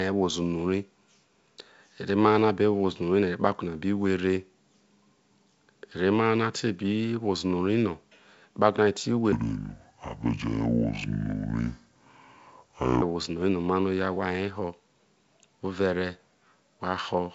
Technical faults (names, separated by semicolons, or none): section at the wrong speed